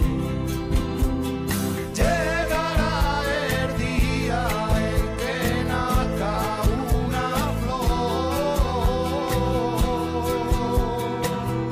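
Nothing is technically wrong with this audio.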